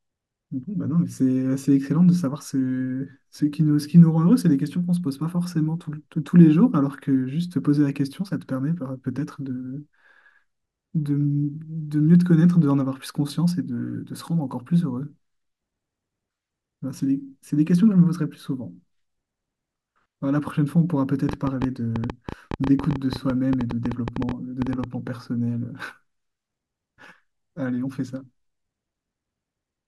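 From 21.29 s to 24.85 s, a train of clicks runs over the speech. About ten sharp ticks arrive each second, roughly forty in all. They share much the same shape, but their spacing is uneven, so they sound like scattered popping rather than a steady beat. They stand well above the speech, around 10 dB louder at their peaks, and they carry on through pauses. The likely cause is electrical interference or a faulty connection or power supply.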